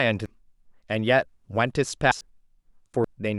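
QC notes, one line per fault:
0.26–0.35 s: compressed frames skipped. About a third of a second of speech is missing. The decoder never played those frames, so the sound jumps ahead.
2.12–2.30 s: compressed frames skipped. Roughly 0.4 s of audio drops out. The jump is again a whole number of frames.
3.04 s: compressed frames skipped. Around half a second vanishes at once.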